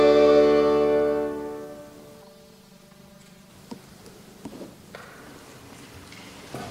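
From 2.22 to 3.50 s the sound turns hollow and phasey. This is channel delay (comb filtering): one channel lags by around 5 ms, and the mono sum cancels at evenly spaced frequencies from roughly 100 Hz upward. Unlike flanging, the notches stay fixed and don't sweep.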